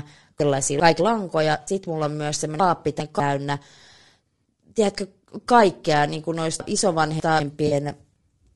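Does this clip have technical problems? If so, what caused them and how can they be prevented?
Yes. Low-delay AAC compression runs through the whole clip and is plainly audible: the speech sounds rough and grainy, with noise filling the gaps between harmonics and a thin, synthetic-sounding top band. The likely cause is AAC-ELD at a rate around 32 kbps, where its short frames resolve pitch harmonics poorly. Raising the bitrate or switching to a codec mode designed for speech at that rate would prevent it.

Chunks out of order occur at 0.4 to 1.0 s, at 2.6 to 3.2 s just after "mulla on myös", and at 6.6 to 7.4 s just after "tiedätkö kaikkea niin kuin". In each case a 200 ms block plays two or three blocks late, leaving a jumbled moment. A jitter buffer that reorders chunks by sequence number before playback would prevent this.

AAC frame loss with concealment appears at 1.61 to 1.71 s, just before "mulla on myös", and at 7.67 to 7.73 s. 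The decoder bridges roughly 60 ms and 40 ms gaps by extrapolating the previous spectrum, which produces brief smeared, phasey patches. Forward error correction or retransmission on the transport would prevent these dropouts.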